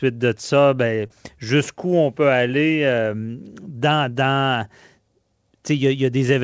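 A speech recording that's come through a call, and there's one real glitch: short concealed packet loss at about 1.07 to 1.13 s. Roughly 30 ms of audio never made it to the decoder in time, so the receiver papered over the gap by stretching out the preceding sound and then easing back into the real signal, which comes across as a quick smear or wobble. For context, the call path tops out at 8 kHz, which fits G.722 at around 64 kbps.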